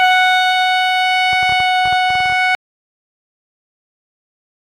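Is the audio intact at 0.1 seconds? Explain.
Yes, the music plays through intact at 0.1 seconds, with no fault at that moment.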